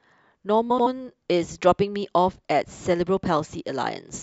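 At 0.70 s, running to about 0.87 s, the speech breaks into a brief garbled flutter: frames out of order. Two adjacent blocks of roughly 78 ms each, which points to runs of three codec frames, were decoded in swapped order, so the later half plays before the earlier one. Unlike a dropout or a repeated frame, nothing goes missing or recurs. The timing afterwards stays intact, because the audio is only rearranged.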